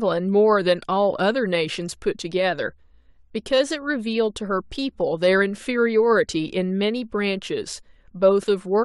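Nothing technically wrong turns up anywhere in this short speech recording, so there are no times or causes to point to.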